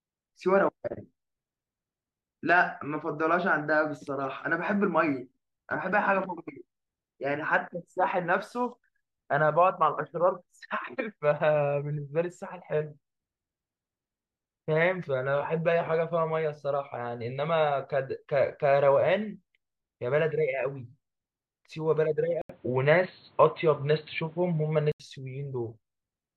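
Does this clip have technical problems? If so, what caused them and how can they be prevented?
Yes. From 22.42 to 25.00 s the speech turns dull and boxy, with nothing above 4.3 kHz, a level shift of about 5 dB, faint new background noise and an 80 ms gap, likely an input switched to a poorer device. Fixing the input device in the recording software prevents it.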